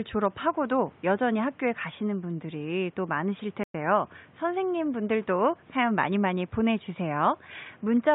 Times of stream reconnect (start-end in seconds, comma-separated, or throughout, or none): 3.63-3.74